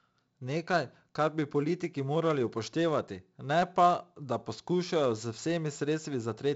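From start to finish the speech has passed through 4-bit ADPCM compression, where each sample is coded as a coarse step from a predicted value. The heavy damage fits a 64 kbps stream at a reduced sample rate. Nothing remains above 7.7 kHz, so the sound is dulled. The quantisation error rides on the signal level as a gritty hiss over every loud stretch, and sharp onsets distort when the adaptive step fails to keep up.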